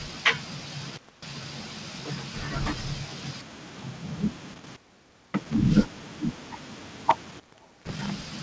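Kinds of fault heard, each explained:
Echo leak: Near the end of the speech, from 7.58 to 7.73 s, a faint delayed copy of the talker returns about 332 ms behind the original, sitting roughly 30 dB below it and lasting only a brief scrap. The likely cause is a far-end loudspeaker whose echo canceller failed to fully suppress the signal its microphone recaptured, letting that residue travel back over the call path, which here carries nothing above 8 kHz.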